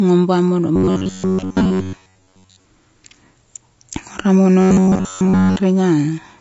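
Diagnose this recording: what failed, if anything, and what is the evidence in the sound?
Throughout, the speech is rough and grainy, with noise filling the gaps between harmonics and a thin, synthetic-sounding top band. This is a codec-stage fault, likely low-delay AAC compression (AAC-ELD) at about 32 kbps, where short frames starve the harmonics of bits.

From 0.76 to 2.65 s and again from 4.61 to 5.57 s, the speech collapses into a rigid, metallic buzz near 94 Hz that only loosely tracks the syllables. This is likely robotic sound from repeated short buffers at the driver or buffer stage. Audio arrives too seldom, so most of it is replaced by repeats of an 11 ms block.

At 3.89 to 3.93 s there is a brief smeared, noisy patch. This is AAC frame loss with concealment at the network or codec stage. About 30 ms of data went missing, which points to a single lost frame, and the decoder filled the gap by extrapolating the previous spectrum.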